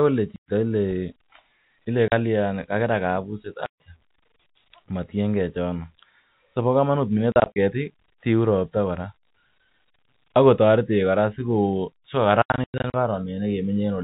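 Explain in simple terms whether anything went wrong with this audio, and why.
Packet loss filled with silence at 0.36, 2.08, 3.66, 7.32 and 12.42 s: pieces of the speech went missing in transit, and the receiver played silence instead, leaving abrupt holes.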